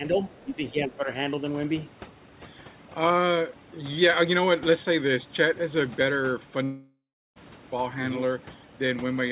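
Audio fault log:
throughout: Overdone noise removal. Bands near the noise floor are cut hard. The background drops and breaks up into twinkling specks.
0.39 to 0.44 s: Other side's voice leaking through. A faint scrap of a second voice, about 35 dB below the talker, likely loudspeaker echo left behind by the echo canceller.
0.45 to 1.08 s: Speech suppressed in double talk. The talker's voice dips by up to about 10 dB over roughly half a second. The likely cause is the echo canceller ducking it while the far side spoke.
6.64 to 7.38 s: Long network dropout. About 0.72 s of audio is missing. A fading buzz or hiss stands in for it, followed by about 0.36 s of silence, likely from lost packets.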